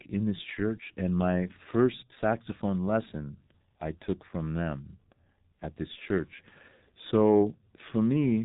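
Throughout the speech, G.723.1 codec damage is heavy: nothing reaches above 3.8 kHz, and the slow 30 ms frame updates smear consonants into a muffled, hoarse texture, which fits a bitrate near 6 kbit/s. A spectrogram shows a hard ceiling at 3.8 kHz with blurred, blocky formant bands.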